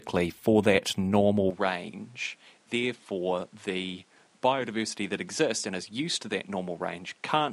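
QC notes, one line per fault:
1.51 s to the end, input likely switched to a poorer device: after "for that normal", sound stops at 11.4 kHz, drops about 10 dB, and gains new noise, unlike a simple filter.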